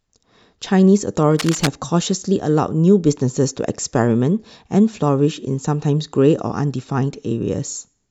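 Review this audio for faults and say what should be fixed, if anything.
Cable scratch noise runs from 1.32 to 1.68 s, a dense, ragged rustle sitting not far below the speech. It is likely a worn cable or connector being moved, its contact resistance fluctuating rapidly and injecting bursts of noise. Replace or reseat suspect leads and secure cables so they cannot shift during recording.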